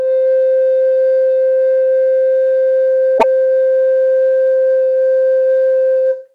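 Around 3.18 to 3.24 s the music jumps ahead with a brief garbled glitch, likely a broken MP3 bit reservoir, where frames after a cut borrow the wrong bytes.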